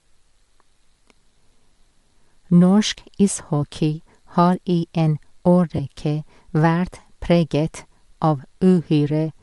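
A speech recording with a coarse, breathy and grainy upper band throughout, where the high frequencies sound smeared and noise-like rather than detailed. That texture points to Bluetooth LC3 compression as the likely cause. This transform codec encodes short blocks of audio and, when bits are scarce, discards parts of the upper spectrum and substitutes shaped noise. The damage here is plainly audible and fits a moderate rate around 48 kbps with 10 ms frames. From 5.77 to 5.80 s there is a brief 20 ms stretch of lost LE Audio frames, consistent with two missing 10 ms frames. Across that gap the decoder conceals the loss by repeating the last received spectrum with randomised phase, so the sound turns into a short noisy smear instead of a clean continuation before normal decoding resumes.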